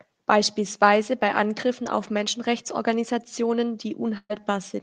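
Near the end, from 4.17 to 4.41 s, a burst of packet loss cuts out a run of packets. The receiver covers the hole by extending the last sound for about 120 ms while fading it, so the speech turns into a brief held buzz or hiss. That decays into roughly 40 ms of silence before the speech picks up again. About 120 ms of the original audio never arrives, leaving an audible skip forward.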